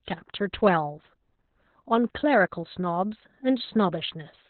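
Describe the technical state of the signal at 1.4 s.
At 1.4 s the speech carries Opus voice compression, present throughout. Nothing remains above about 4.2 kHz, and the coarsely coded linear-prediction excitation sounds hoarse and slightly robotic, unlike a plain low-pass filter. That fits narrowband SILK at roughly 8 kbps.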